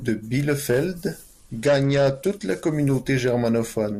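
A Bluetooth SBC bit pool drop runs from 1.24 to 2.75 s. The squeezed link starves upper sub-bands, dulling the speech's treble and adding grit, which fits a bit pool falling from 31 to 13.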